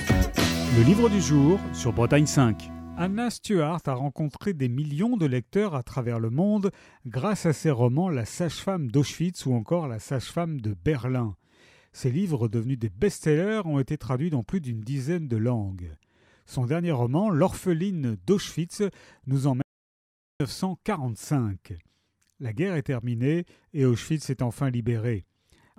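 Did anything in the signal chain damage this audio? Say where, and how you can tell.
Yes. There is an audio dropout to silence from 19.62 s to 20.4 s. The sound cuts off abruptly and comes back abruptly, and about 780 ms is missing. The gap is silent, with no room tone or hiss underneath. That points to the capture side, before encoding. The input was likely lost for a moment through a device disconnect, a failed link or a brief mute, and the recorder kept writing silence. Whatever happened in that stretch is gone.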